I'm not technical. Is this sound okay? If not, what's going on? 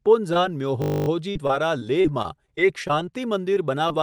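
No, there are three kinds of fault in this speech recording.

At 0.33 to 0.37 s, 3.54 to 3.58 s and 3.88 to 3.92 s you can hear short concealed packet loss. Each time, about 20 ms of the call arrived too late to play, so the receiving end covered the hole by stretching the sound just before it. You hear a tiny smear or wobble. Unlike the choppy stretch described below, these are single, isolated blips.

From 0.82 to 1.08 s there is a system hang loop. The computer briefly froze, and the sound hardware kept replaying the same 20 ms scrap of audio, 13 times in a row. Because that scrap is so short and repeats 50 times a second, it comes out as a steady buzz, not a stutter. What separates this from packet loss is that an identical piece repeats exactly, whereas packet loss blends a patch back into fresh sound. Essentially nothing was skipped. The recording simply stalls on one spot.

From 1.31 to 3.13 s there is repeated packet loss, which gives a robotic sound. 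Nine separate dropouts, the longest about 40 ms, were each patched the same way as the single blips. Together they cover about a tenth of that stretch. Because the gaps follow one another closely, the sound turns choppy, with small pieces missing. The isolated blips are heard once and pass, but here the damage continues for almost two seconds.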